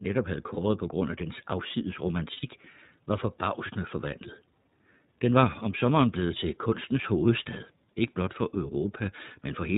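The iLBC codec runs throughout the speech, band-limited below 4 kHz with a slightly rough, synthetic texture. Each frame's excitation is coded independently, and the plainly audible damage fits the 13.33 kbps mode with 30 ms frames.

Lost iLBC frames occur at 0.54 s, just before "på grund af dens", and at 2.34 s, after "grund af dens afsides". The gaps last about 30 ms and 90 ms, fitting one and three missing frames. The decoder repeats the last pitch cycle mixed with noise, so each gap sounds like a brief held, buzzy vowel, and the speech recovers almost immediately.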